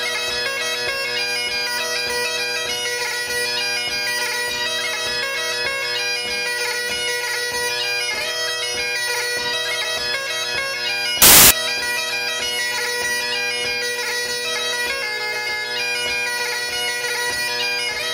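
From 11.22 to 11.51 s, samples built from the wrong bytes turn the sound into loud, harsh broadband noise. The waveform fills with dense, noise-like samples, and the spectrogram shows flat broadband energy.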